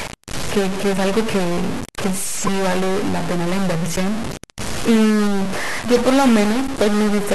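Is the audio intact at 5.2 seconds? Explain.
No. At 5.2 seconds, as everywhere else in this speech clip, a stuck bit corrupts the signal: one data bit, likely held at a fixed value by a broken line or converter, knocks about half the samples off by that bit's weight. It sounds like grainy noise if a low bit is stuck or harsh, buzzy distortion if a high one is, with pauses filled by noise. On a waveform the trace shows step offsets between levels; a spectrogram shows broadband energy smeared across all frequencies, even in the gaps.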